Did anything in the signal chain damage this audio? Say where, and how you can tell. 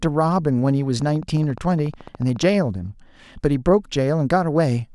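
Yes. A train of clicks at a regular 14.1 per second, about twenty clicks as loud as the speech, runs from 1.02 to 2.44 s, likely interference coupling into the analogue wiring.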